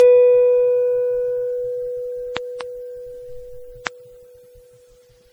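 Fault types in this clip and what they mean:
Generation loss: The music sounds swirly, hollow and smeared, with blurred attacks, more degraded than a single low-bitrate pass would explain. This fits repeated lossy coding, likely about five MP3 passes near 64 kbit/s, each requantising on a shifted frame grid.
Loud pop: Sharp transients sit on top of the music, which continues underneath: a double pop between 2.37 and 2.63 s, then a single one at 3.87–3.89 s, peaking about 15 dB above the signal. These are likely voltage steps from a switch, plug or static discharge.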